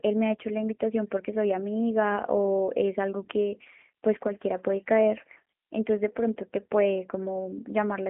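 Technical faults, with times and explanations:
Throughout, G.729 codec. The speech is band-limited, with nothing above 3.6 kHz, and has a rough, slightly synthetic edge. That points to a low-rate codec, around 8 kbit/s, rebuilding each 10 ms frame from a vocal tract filter, pitch prediction and a few pulses.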